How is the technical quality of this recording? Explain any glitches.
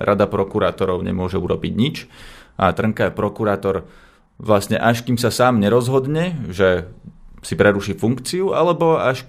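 Nothing goes wrong anywhere in this speech recording, so there are no glitches to explain.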